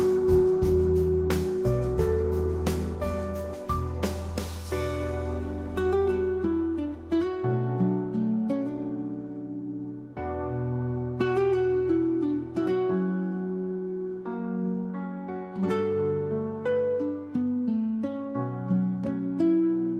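No faults turn up anywhere in the recording, with nothing audible to flag at any point.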